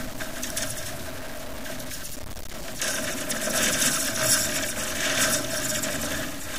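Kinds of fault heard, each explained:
Low bit depth without dither: Grainy, buzzing distortion clings to the sound throughout and rises and falls with it, sitting only about 10 dB below the signal. Unlike steady dithered hiss, it follows the signal, which fits a likely 5-bit truncation.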